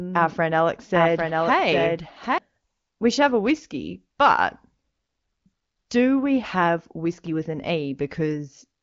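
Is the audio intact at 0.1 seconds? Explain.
No. A doubled audio track is already under way at 0.1 s and runs until 2.38 s. A second full-band copy of the speech trails the original by roughly 0.7 s, sitting about 5 dB lower, with no decay or room colouring, so it sounds like a flat, distinct repeat rather than an echo. This is most likely a second, slower capture path or an edit that left two out-of-step copies mixed together.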